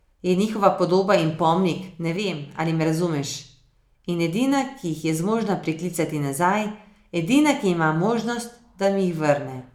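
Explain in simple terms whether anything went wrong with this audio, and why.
Something did go wrong, briefly. Right after "podoba in pomnik ne", from 2.17 to 2.54 s, the speech suddenly gets noticeably quieter for about 0.38 s, then jumps back before "ali me razumeš". The likely cause is one channel drops out: one side of the stereo recording goes missing, so when both sides are combined only half the signal remains. Unlike a full dropout, the sound never goes silent, and unlike a fade, the level steps down and back up abruptly.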